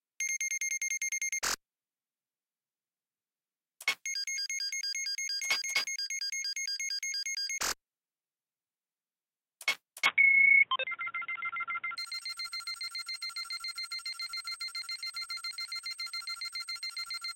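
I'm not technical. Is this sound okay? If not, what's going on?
No. From about 10.1 to 12.0 seconds the sound turns dull and boxy, loses its highs, shifts in loudness and picks up new background noise, likely an input switched to a poorer device.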